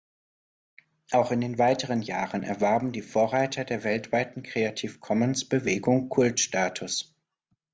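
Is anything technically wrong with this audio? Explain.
Yes. From 1.68 to 4.32 s the speech carries a resampler restarted on every block: each block was converted from 24 kHz to 16 kHz separately, so every edge gets a small error. This gives a 25 Hz tick-buzz, which fits 40 ms blocks. Unlike hum, it follows the signal.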